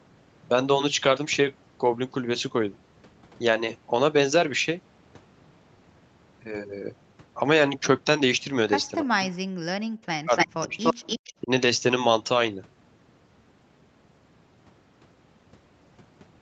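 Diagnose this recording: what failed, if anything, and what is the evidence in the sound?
Speech suppressed in double talk, in the call processing: the sound drops by about 40 dB at 9.05–9.4 s and 10.05–10.99 s, and by about 15 dB at 11.42–11.5 s. This is likely echo-canceller ducking. Unlike network dropouts, it appears as dips in level rather than silent gaps with glitches.

Echo leak, also in the call processing: a copy of the sound returns about 296 ms late, nearly as loud as the original, at 10.37–10.47 s and 10.83–11.33 s. The likely cause is leftover loudspeaker echo. The fixed delay sets it apart from room reverberation.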